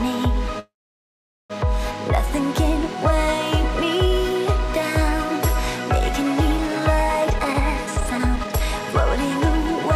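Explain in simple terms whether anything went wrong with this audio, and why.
From 0.59 to 1.52 s there is a call audio freeze, likely from delayed packets: the sound stalls, goes silent for about 0.8 s, then resumes without losing anything, unlike a dropout. From 7.21 to 8.94 s, a jitter buffer speed-up plays the sound about 1.4 times faster at unchanged pitch, trimming roughly 0.7 s, so it sounds hurried rather than squeaky.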